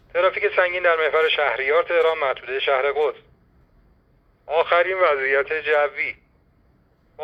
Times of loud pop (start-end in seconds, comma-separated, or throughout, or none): none